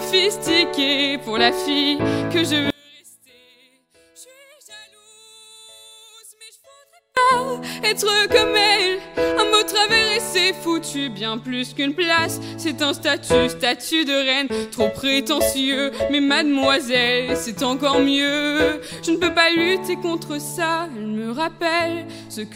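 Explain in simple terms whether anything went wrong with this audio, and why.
From 2.70 to 7.17 seconds the sound suddenly drops almost to nothing, leaving only a faint trace. The likely cause is one channel inverted: one side of the stereo signal is flipped upside down, so the matching parts of both sides cancel out.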